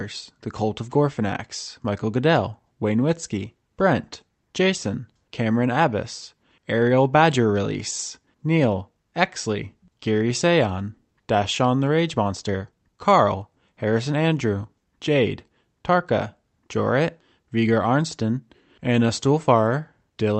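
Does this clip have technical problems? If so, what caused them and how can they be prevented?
Yes. Throughout this speech, there is clock drift between sender and receiver. The sending side's clock runs roughly 4 percent fast. More audio arrives than the receiver plays out. Its jitter buffer keeps filling, so it has to throw material away to keep delay in check. The result is a faint, persistent unsteadiness in timing rather than a single obvious glitch. Prevention: lock both ends to a common clock, or resample the incoming stream to match rates continuously.

Repeated timing corrections run from 0.35 s to the end at 20.39 s. The receiver trims short pieces again and again to absorb material arriving at 104 percent speed. Every edit goes the same way, removing audio. The gaps between them are uneven. Each cut is tiny. Together they sound like slight hiccups and a tempo that never quite settles. 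The call codec path sounds band-limited at about 8 kHz, consistent with Opus. Prevention: fix the clock mismatch at source so the buffer needn't keep correcting.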